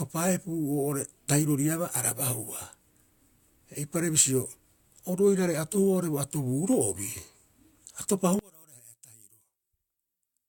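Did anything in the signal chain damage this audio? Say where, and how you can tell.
Yes: one channel inverted, likely in analogue wiring. From 8.39 s to the end, the centred speech collapses by about 26 dB in mono, leaving a faint residue.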